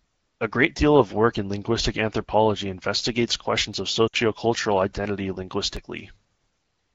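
Just after "anthropology investigates questions of", from about 4.07 to 4.16 s, there's a burst of lost AMR speech frames. Roughly 60 ms went missing, which fits three 20 ms frames, and the wideband decoder papered over it by repeating its last good settings at falling level, so the speech smears and sags briefly before recovering a bit rough.

Then at 5.77 s you get a block of digital silence, just 2.18 ms of silence dropped into the signal. With no fade at either edge it comes across as a sharp little tick rather than an audible gap, probably an output buffer that wasn't filled in time.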